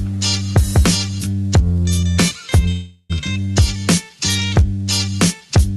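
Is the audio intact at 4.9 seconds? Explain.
Yes, the audio is intact at 4.9 seconds, with no fault there beyond the ordinary character of the call path, whose Opus coding leaves the sound band-limited to about 12 kHz.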